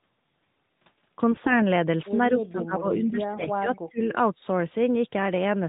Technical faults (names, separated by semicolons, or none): periodic USB or driver dropouts; AMR bit errors; speech suppressed in double talk